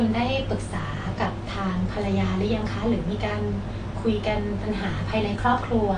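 Speech throughout the clip carries plainly audible AAC compression damage, likely from AAC-LC coding at a low rate; the degree of damage fits a bitrate around 32 kbps. Nothing reaches above 9.8 kHz, so the top octave is missing and the sound is dull. With so few bits per frame, the encoder quantises the spectrum coarsely, leaving smeared transients and a warbling, fizzy texture on sibilants and held vowels.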